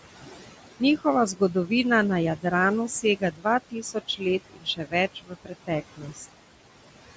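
Speech, run through a call's noise suppressor that's working a bit too hard. Throughout, noise suppressor artifacts are there: the room noise gets pulled down by about 17 dB between phrases and creeps back up under the talking. On top of that, the suppressor mistakes bits of speech for noise and cuts them, at 1.33–1.71 s, 2.36–2.52 s, 2.89–3.46 s, 3.71–4.23 s, 4.5–4.94 s, 5.15–5.7 s and 5.92–6.2 s. The early ones are short and dip about 12 to 17 dB, but from 4.5 s on the drops reach about 18 dB, so soft consonants and word endings there sound swallowed or go faint.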